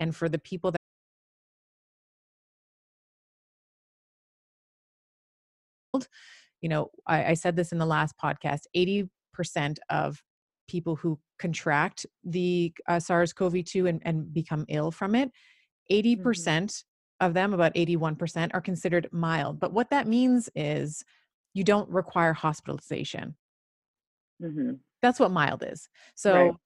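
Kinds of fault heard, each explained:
Audio dropout to silence: right after "for the people" the speech cuts out at 0.77 s and returns mid-flow at 5.94 s, leaving about 5.2 s of dead digital silence with no room tone at all. That points to a likely lost input, so whatever was said there is simply gone.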